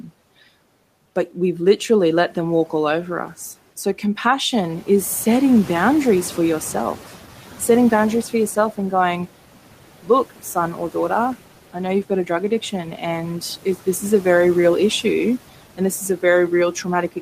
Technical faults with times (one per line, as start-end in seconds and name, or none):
0.00-17.21 noise suppressor artifacts
4.52-7.09 noise suppressor catching up